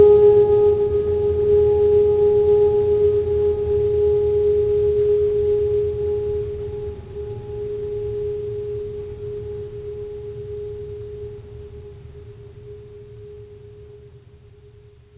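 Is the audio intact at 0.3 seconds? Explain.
Yes, the music is intact at 0.3 seconds, with nothing at that moment beyond the narrow top end of a G.711 call path that carries nothing above 4 kHz.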